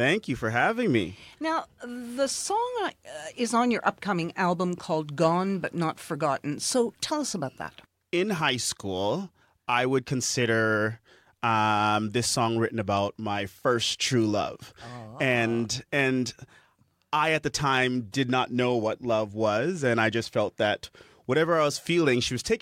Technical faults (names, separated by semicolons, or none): block size mismatch (truncated)